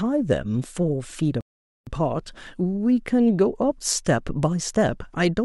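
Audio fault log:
1.41–1.87 s, playback stall: the speech cuts off mid-flow and the output sits silent for 460 ms before resuming. This is likely the player running short of buffered data or its output thread being held up, so nothing reaches the speaker until it recovers.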